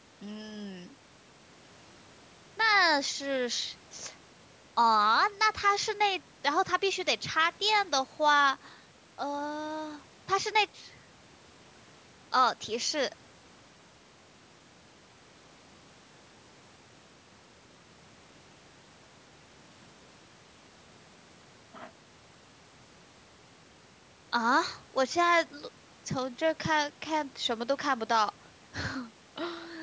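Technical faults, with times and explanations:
No technical faults, so there are no times or explanations to give.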